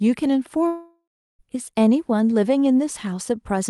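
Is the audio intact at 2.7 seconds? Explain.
Yes, the speech is intact at 2.7 seconds, with no dropout, glitch or other fault at that moment as it passes through the WebRTC call path.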